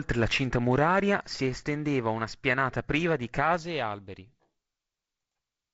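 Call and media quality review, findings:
No faults found in audio.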